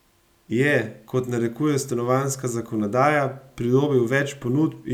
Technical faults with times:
none

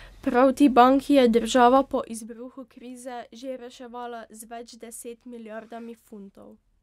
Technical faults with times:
1.74-2.35 zipper noise

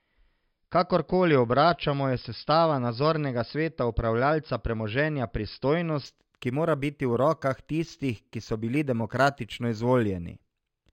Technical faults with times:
6.06-10.93 imaging from linear upsampling

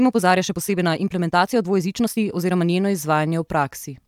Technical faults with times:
0.00-2.66 time-stretched section

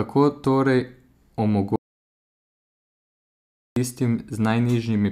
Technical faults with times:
1.76-3.76 audio dropout to silence

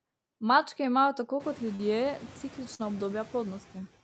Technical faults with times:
0.00-4.04 noise suppressor artifacts
1.75-1.82 short concealed packet loss
2.75-2.82 short concealed packet loss

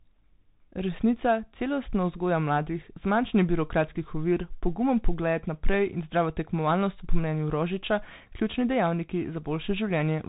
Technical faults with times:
0.00-10.29 Bluetooth CVSD headset codec

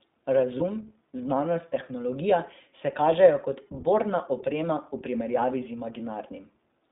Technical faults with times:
0.00-6.91 iLBC codec
0.58-0.61 lost iLBC frames

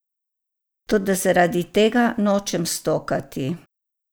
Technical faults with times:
none

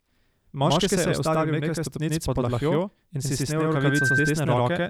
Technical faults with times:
0.00-4.90 channel delay (doubling)
3.67-4.33 loudspeaker feedback squeal

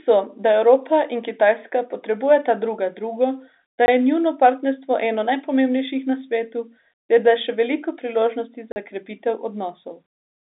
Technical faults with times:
3.86-3.88 block of digital silence
8.72-8.76 block of digital silence

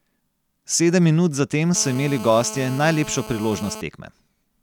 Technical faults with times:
1.75-3.81 GSM phone buzz

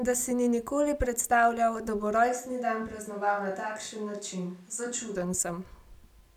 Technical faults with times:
2.30-5.14 switch to a distant microphone

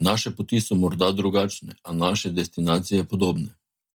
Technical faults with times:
0.00-3.99 Bluetooth LC3 compression

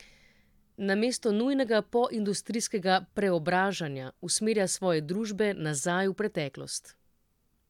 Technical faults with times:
none

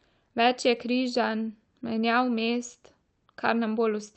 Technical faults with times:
none

